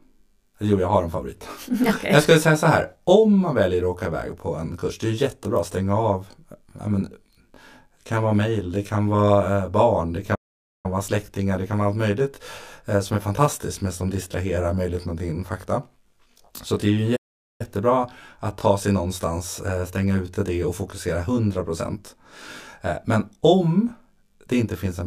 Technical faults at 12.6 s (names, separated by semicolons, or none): channel delay (comb filtering)